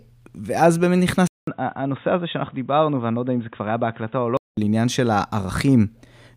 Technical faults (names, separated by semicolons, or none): input switched to a poorer device